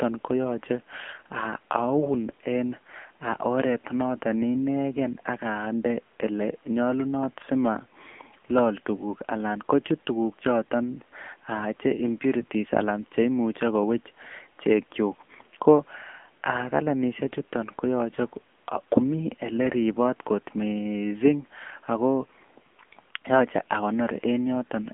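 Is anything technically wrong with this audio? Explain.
Yes. Throughout, the speech carries AMR narrowband mobile codec damage. Nothing passes above 3.6 kHz. Plainly buzzy, synthetic artefacts point to a low bitrate near 8 kbps.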